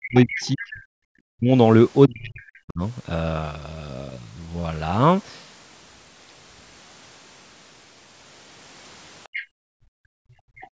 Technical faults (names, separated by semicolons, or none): speech suppressed in double talk; other side's voice leaking through; background gated by the echo canceller